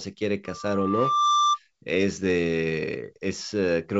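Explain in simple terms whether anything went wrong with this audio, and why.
Loudspeaker feedback squeal appears from 0.46 s to 1.59 s. The microphone picks up its own loudspeaker, and a 1.2 kHz tone keeps reinforcing itself, swelling over about a second until it is slightly louder than the speech.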